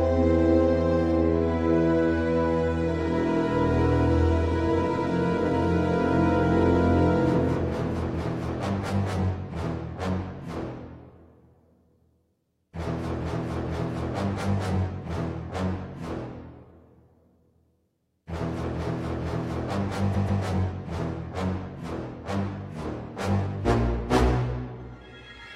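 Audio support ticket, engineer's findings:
Stutter at 4.93–5.02 s: a 93 ms block of sound plays twice. Repeated frames in the encoded stream, a duplicated write or resend, which fits two frames of about 46 ms each. Adds 93 ms.

Stutter at 20.11–20.39 s: a 139 ms block plays three times in a row. Same repeated-frames fault, consistent with three duplicated frames. Adds 0.28 s.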